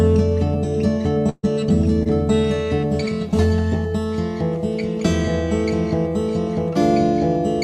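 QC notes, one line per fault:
1.29–1.45 s, burst of packet loss: about 140 ms of the music never arrived in time, so the receiver stretched the last sound for 136 ms, fading it down, with roughly 30 ms of silence. It's heard as a held, dying sound, then the music picks up further along.
2.03–2.07 s, short concealed packet loss: roughly 20 ms of audio went missing, and the decoder filled 23 ms by extending the preceding sound before blending back. The result is a brief smear or wobble in the music rather than a clean dropout.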